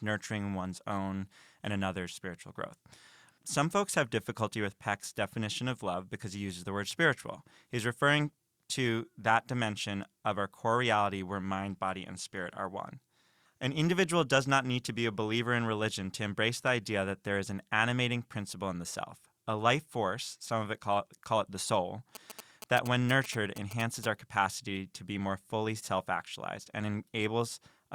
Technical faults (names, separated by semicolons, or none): GSM signalling bursts